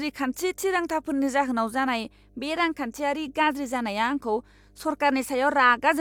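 Mains hum runs under the speech from start to finish: a steady 50 Hz tone sitting roughly 30 dB below the speech level. It comes from the power line coupling into the signal path, either through a ground loop or from a nearby transformer.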